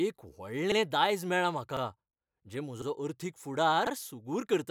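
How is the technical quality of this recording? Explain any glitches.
The recording has one recurring fault, overlapping chunks, at 0.72–0.77 s (just before "दायज मेळ्ळां"), 1.77–1.82 s (just after "दायज मेळ्ळां"), 2.82–2.87 s and 3.87–3.92 s. The speech was handled in 1.0 s blocks, and each new block began 50 ms before the previous one finished, so that sliver plays twice at every join. It is heard as a brief stutter or click once per second. On a waveform, a 50 ms stretch repeats with a discontinuity at each seam. A spectrogram shows thin vertical lines at the joins.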